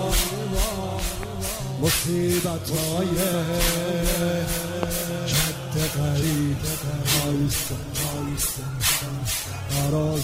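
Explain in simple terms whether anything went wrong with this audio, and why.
Two things went wrong.

The first is a loud pop. A sudden jolt of electricity, likely from a plug, a switch, static or a glitch in the playback hardware, got added to the signal. You hear it as sharp pops on top of the sound, which keeps going underneath. There are two in quick succession between 0.99 and 1.25 seconds, and a single, stronger one at 4.83 to 4.85 seconds.

The second is an adaptive stream at a lower bitrate. From 6.52 seconds to the end, the streaming connection slowed, and the player switched to a smaller, lower-quality version of the audio instead of stopping. There's no gap, but the change is sudden, and the compression becomes easier to hear.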